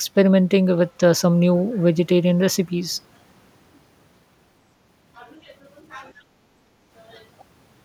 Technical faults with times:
6.13-6.91 background gated by the echo canceller

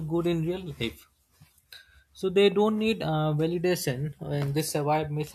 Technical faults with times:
none

